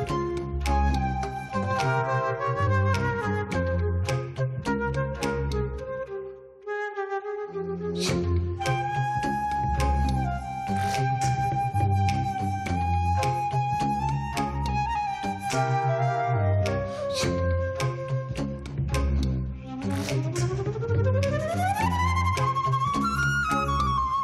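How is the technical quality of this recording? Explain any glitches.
The technical quality of this recording is sound, with no glitches to explain.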